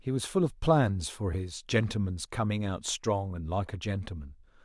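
Nothing in this recording stands out as a technical fault; the speech carries along without any glitches or interruptions that an ear would catch.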